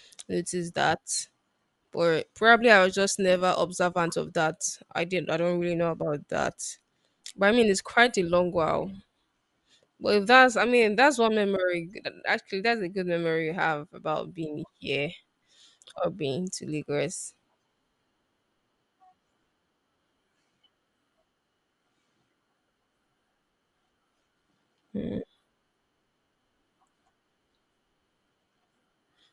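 From start to finish the speech carries plainly audible Bluetooth LC3 compression, likely from an LE Audio link near 48 kbps with 10 ms frames. Zeroed upper bands refilled with noise give it a breathy, grainy edge; a spectrogram shows smeared, noise-like texture above the lower harmonics.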